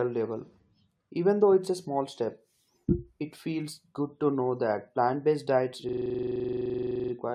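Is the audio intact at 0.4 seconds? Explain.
Yes, the audio is intact at 0.4 seconds, with no dropout, click, distortion or other fault at that point.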